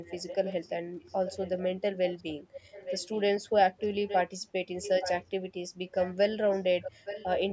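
Speech with an echo leak: a faint delayed copy of the talker, trailing by about 866 ms, surfaces at 0.03–0.72, 1.03–1.67, 2.05–3.21, 3.78–4.19, 4.82–5.25, 5.87–6.14 and 6.5–7.43 s, growing louder after 3.8 s. Unlike room reverb, it is a distinct repeat nearly a second late, not a smeared tail. It is likely a far-end loudspeaker leaking past an incomplete echo canceller.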